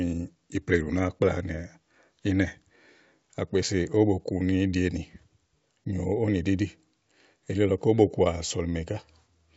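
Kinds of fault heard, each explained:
No faults can be heard in this speech clip. It passes through G.722 wideband telephone coding at 64 kbit/s, which carries the audio up to about 7 kHz and leaves at most a faint trace of its coding.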